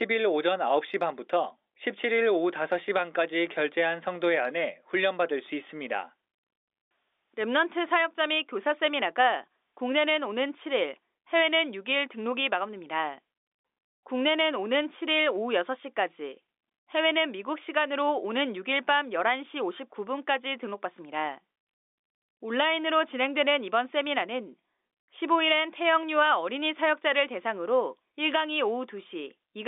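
The speech comes over an ordinary G.711 telephone path, limited to the usual line band of about 300 Hz to 3.6 kHz, and no technical faults can be heard in it.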